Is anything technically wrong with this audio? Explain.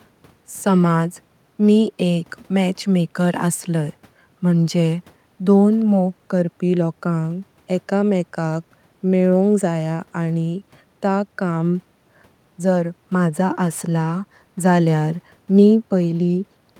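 No, no technical faults are audible.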